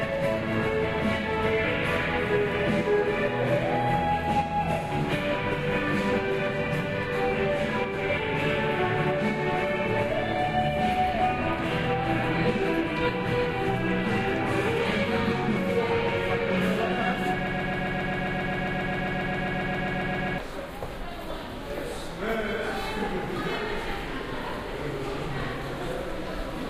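From 17.47 to 20.38 s, a broken-record loop repeats one 0.13 s fragment 22 times, exactly and unlike a brief stutter, likely from a stalled player, so the intervening audio is lost.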